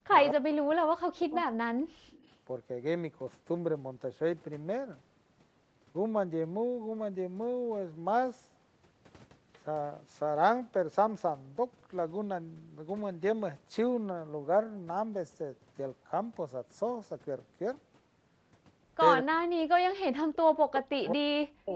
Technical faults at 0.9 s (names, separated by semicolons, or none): speech suppressed in double talk